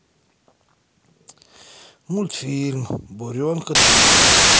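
Speech that, from 3.75 s to the end at 4.59 s, turns into loud harsh noise with the voice buried underneath, slowed to half speed and about an octave lower. This is a wrong sample width fault, which fits 32-bit samples read as 16-bit, doubling the sample count and mixing mismatched byte halves.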